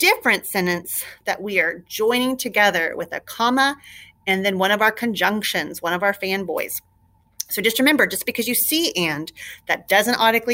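Nothing here sounds broken: no dropouts, glitches or other faults turn up anywhere in the clip.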